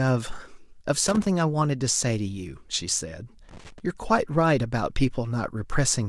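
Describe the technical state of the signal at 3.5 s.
At 3.5 s the speech is hit by loose connector crackle from 3.49 to 3.80 s: a dirty contact makes and breaks intermittently, chopping the signal into irregular scratchy pops.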